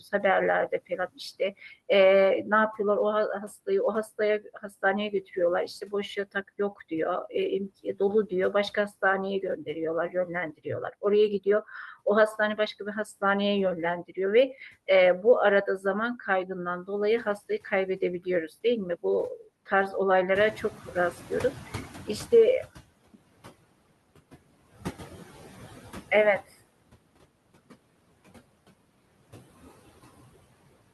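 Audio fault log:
Throughout: noise suppressor artifacts. The background is pulled down by about 20 dB wherever it is judged steady noise, with the gain set frame by frame across the spectrum, so the floor drops away between phrases and swells back up under the speech.
0.0 to 1.6 s, 3.66 to 11.46 s, 16.47 to 18.49 s: speech cut by the noise suppressor. In these stretches the suppressor mistook parts of the speech for noise and lowered them along with the background, by up to about 15, 18 and 12 dB respectively. Soft consonants and trailing word endings come out swallowed or faint. The first and third spans lose only brief moments, roughly 150 ms each. The middle span is worse, with around a second of speech cut in total.
20.35 to 22.81 s: noise suppressor catching up. Room noise steps up by about 12 dB around 20.5 s, still sitting roughly 15 dB below the speech. The suppressor's noise estimate trails this jump, so the louder background comes through with less reduction at first. 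It then fades over about 2.5 s as the estimate adapts, settling at roughly 18 dB of reduction. Through the Opus call path, band-limited near 12 kHz, this is heard as a noise swell that slowly sinks.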